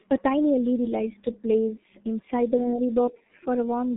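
From start to finish the speech carries heavy G.723.1 codec damage. The audio sits in a telephone band of roughly 150 Hz to 3.7 kHz, with nothing above 3.8 kHz, so it sounds muffled and boxy. The codec rebuilds speech from a sparse model refreshed only every 30 ms frame, which leaves a hoarse, buzzy texture and smeared consonants. The degradation fits a low-rate setting near 6 kbit/s.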